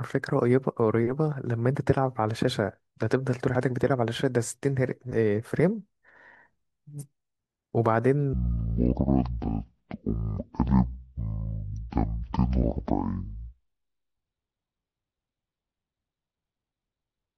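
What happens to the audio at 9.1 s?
At 9.1 s you're in a stereo-read-as-mono stretch (8.33 s to the end): interleaved left and right samples play as one channel, so the speech drops to half speed and an octave lower.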